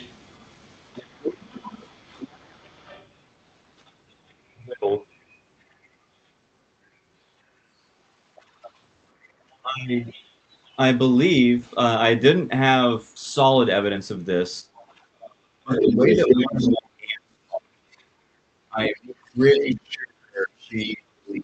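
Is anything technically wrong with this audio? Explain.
Yes, the audio has two kinds of problem.

Other side's voice leaking through: a second, fainter voice sits under the speech from 0.00 to 4.31 s (about 25 dB down), 8.42 to 11.71 s (about 30 dB down), 14.76 to 16.69 s (nearly as loud, about 5 dB down) and 19.07 to 19.65 s (about 20 dB down). This is likely loudspeaker echo that the echo canceller left in.

Speech suppressed in double talk: the main voice dips by roughly 10 dB in brief bites adding up to around a tenth of a second between 8.62 and 9.69 s. From 14.62 s to the end it is pushed down by as much as roughly 35 dB. This is likely the echo canceller turning everything down while both sides talk. Unlike dropouts from packet loss, these dips line up with the leaked voice.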